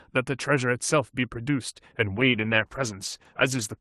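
From 2.19 s to the end, the speech suffers a call bitrate drop. Up to that point the call path carries it with a 12 kHz top end that fits a 48 kbps Opus stream. The encoder is then starved of bits, in a way that fits a fall to 14 kbps held for 1.5 s, so the sound turns rough and watery and loses its upper frequencies. Packet loss leaves gaps or robotic repeats, but here the speech runs on continuously and only its texture coarsens.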